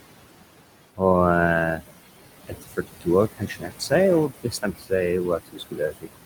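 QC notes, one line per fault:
Throughout: noise suppressor artifacts. The room noise, which sits about 10 dB under the speech, pumps down between phrases and returns beneath them. The suppressor pulls noise-dominated bands down by about 20 dB, frame by frame.
2.47–3.07 s, 3.36–3.92 s, 4.28–4.92 s, 5.38 s to the end: speech cut by the noise suppressor. Parts of the speech fade and sound swallowed, by about 18 to 22 dB at worst, roughly a third of a second in each of the first three spans. Those quiet stretches resembled the background, so the suppressor cut them along with the noise.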